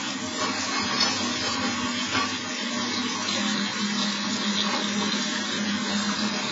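Heavy AAC compression, likely AAC-LC at a very low bitrate consistent with about 16 kbps, runs through the whole clip of sounds. Nothing survives above 7.5 kHz, so the audio sounds dull and smeared, with a warbling, fizzy texture on sustained parts.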